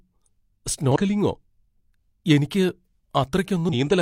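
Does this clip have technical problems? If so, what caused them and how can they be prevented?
Yes. Damaged data in a compressed stream causes two brief glitches in the speech, at 0.92–0.96 s and 3.69–3.74 s. Corrupted bytes make the decoder misread frames, lose sync and hunt for the next frame header. Verify files with checksums and stream over an error-protected connection.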